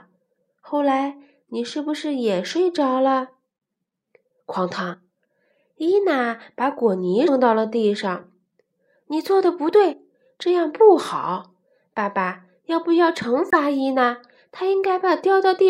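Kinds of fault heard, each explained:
Compressed frames skipped: Whole compressed frames never reach the output, so the speech jumps forward. This happens at 4.93, 7.27 and 9.92 s, losing about 50 ms, 100 ms and 50 ms.
Corrupt frame decoded: Damaged compressed data was decoded anyway. Flipped bits gave the decoder wrong gains and codes. From 13.50 to 13.56 s, a few frames put energy at the wrong frequencies. The result is a short error peaking near -10 dBFS.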